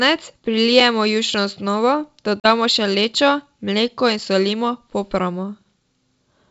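At 2.40 s the speech drops into a hard-edged gap of about 40 ms, packet loss on an ADPCM call, consistent with a couple of lost packets filled with silence. The waveform shows a flat, abruptly cut hole, and the spectrogram a clean vertical blank band. Because the decoder's adaptive predictor and step size drift from the sender's, the speech returning near 2.46 s arrives slightly distorted before settling. The G.722 wideband coding stays clear up to 7 kHz, as fits 64 kbit/s.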